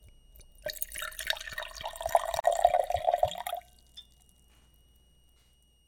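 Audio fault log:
throughout, switching supply whistle: a faint high whistle near 3 kHz, drifting between 2.84 and 2.91 kHz, about 40 dB below the sound, from a power supply cycling audibly.
2.40 to 2.44 s, gap at a join of encoded pieces: a 38 ms gap with smeared edges, where separately encoded pieces were joined with encoder delay and padding left in.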